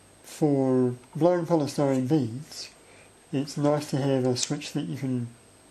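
No technical faults can be heard anywhere in it.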